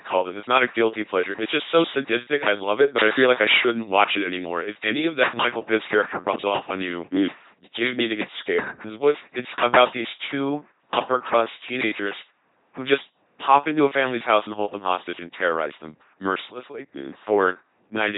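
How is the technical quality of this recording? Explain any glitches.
The technical quality is poor. The speech has been through heavy LPC-10 vocoder coding for the whole clip.

LPC-10 vocoder, throughout: the sound fits a 2.4 kbit/s rate. At each moment, a ten-pole tract filter is excited by either a pulse train or noise, with no mix of the two. Voiced passages therefore come out as a buzzing, mechanical robot voice. On a spectrogram, voiced stretches show rigid harmonic combs, unvoiced stretches show flat noise, and nothing appears above 3.9 kHz.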